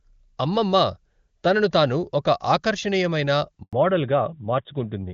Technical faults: handover gap; fallback to narrowband

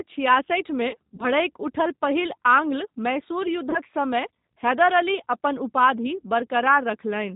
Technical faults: G.729 codec; VoIP packet loss concealed by the speech codec

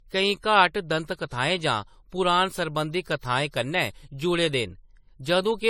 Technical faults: generation loss

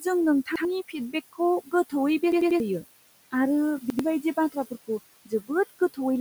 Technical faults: noise suppressor artifacts; repeated buffer; speech cut by the noise suppressor

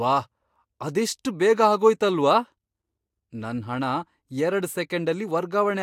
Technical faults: none

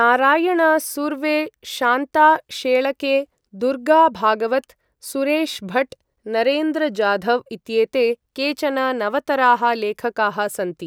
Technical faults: none

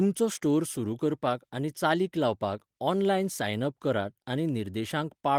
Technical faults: none

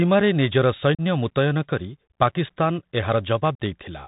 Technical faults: Bluetooth CVSD headset codec; unconcealed Bluetooth headset packet loss

